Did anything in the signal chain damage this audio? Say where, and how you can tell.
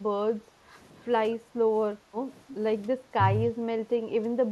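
Yes. Speech suppressed in double talk occurs at 0.58–0.73, 2.09–2.14, 3.10–3.17, 3.54–3.70 and 4.23–4.29 s, in call processing. The speech dips by roughly 10 to 15 dB in short bites. This is likely the echo canceller ducking everything while both ends talked at once.

Background gated by the echo canceller occurs at 1.40–1.53 s, also in call processing. The room tone drops by about 8 dB for roughly 150 ms, then recovers. The canceller clamped the microphone down while the far-end loudspeaker was active, then released it.

Echo leak occurs at 2.49–2.55 s: a faint delayed copy of the speech, roughly 15 dB down, trailing by 276 ms. This is likely residual loudspeaker pickup on the far side that its canceller failed to remove, returned through call processing.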